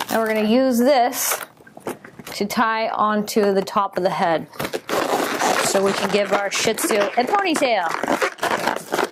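Nothing stood out as a technical fault on listening.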